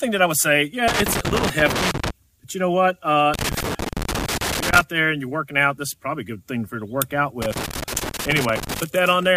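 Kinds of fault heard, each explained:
Loose connector crackle: bursts from 0.88 to 2.10 s, 3.34 to 4.81 s and 7.42 to 8.80 s, each over a second long. A worn or dirty contact keeps making and breaking as it shifts, chopping the signal into irregular scratchy crackle for the length of each burst.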